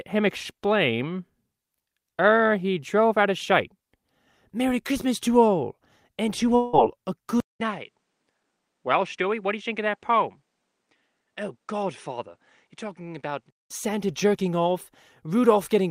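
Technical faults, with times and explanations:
6.55–6.75 s, long network dropout: just after "to all and to", about 0.18 s of audio likely never arrived and is bridged by a fading buzz, a smeared, featureless band on a spectrogram.
7.40–13.70 s, input switched to a poorer device: after a 0.2 s flat gap, the sound is duller and about 5 dB quieter, likely a different microphone. The spectrogram shows nothing above 10 kHz until the return near "jerking off".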